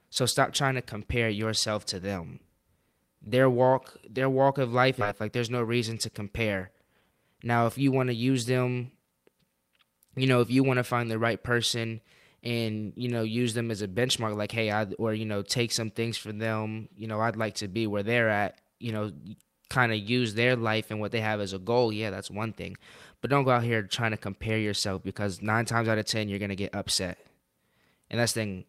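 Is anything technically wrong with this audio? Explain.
Yes, there is one fault in this speech clip: a skip ahead at 5.01–5.03 s, right after "their walk of life". Roughly a second of audio was discarded while later audio was already queued, probably lost in transit or flushed from an overfull jitter buffer, so playback jumps forward with no silence inserted and the delay drops by about a second. It sounds like an abrupt cut mid-flow. On a waveform or spectrogram, the envelope and harmonic pattern change sharply at one seam with no gap between them.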